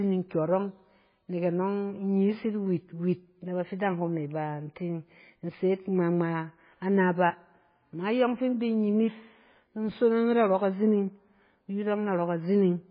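Throughout the speech, everything above 5 kHz is gone and the remaining sound is heavily watery and swirly, likely from MP3 compression at a very low bitrate, around 16 kbps. Unlike a plain low-pass filter, weak frequency components flicker on and off between frames.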